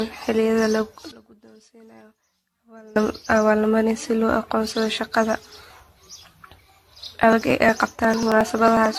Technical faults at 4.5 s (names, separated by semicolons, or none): generation loss